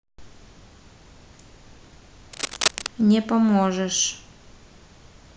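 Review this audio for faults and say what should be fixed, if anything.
From 2.33 to 2.87 s, a burst of scratching, rustling noise sits over the speech, only a few dB below it, which makes it prominent. This is cable scratch noise, likely from a worn cable, connector or control being moved: as the contact shifts, its resistance fluctuates rapidly, and those fluctuations ride on the signal as dense, irregular crackle. To prevent it, replace or reseat the suspect cable and connectors, and keep the cabling still while recording.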